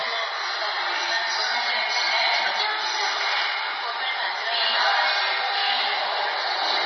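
From start to finish the audio carries heavy damage that points to MP3 compression, likely at a very low bitrate, around 24 kbps. Nothing survives above about 5.9 kHz, so the top end sounds sawn off and dull. With so few bits to spend, the encoder drops quieter frequency lines and lets them flicker in and out between frames, giving that watery, swirling texture. Sharp onsets come through smeared rather than crisp.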